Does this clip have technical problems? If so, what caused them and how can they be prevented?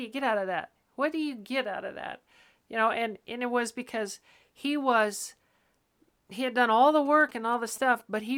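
Yes. GSM signalling bursts: a 2G phone nearby was signalling to its network, and the recording circuit rectified its short radio bursts into the audio. From 7.06 to 8.16 s, just after "had done all the", this produces a galloping pattern of short buzzes at about 217 Hz, roughly 25 dB below the speech. Keeping mobile phones well away from microphones, cables and recorders, or switching them to flight mode, prevents it.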